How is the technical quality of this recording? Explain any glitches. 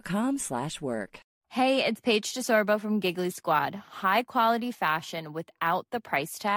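Crude rate conversion mars the speech from 2.27 to 6.16 s. Samples were repeated rather than filtered, which fits a 32 kHz to 48 kHz step, leaving an inharmonic fizz roughly 25 dB down that tracks loud passages, unlike steady hiss.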